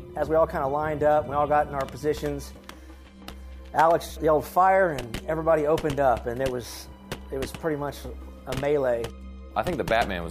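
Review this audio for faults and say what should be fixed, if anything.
A small forward jump in the sound at 2.54, 4.10 and 5.03 s, the first skipping roughly 20 ms, the others only a few milliseconds, is likely a dropped buffer (overrun). There is no silent gap, unlike a dropout. Larger capture buffers and higher-priority audio threads would prevent it.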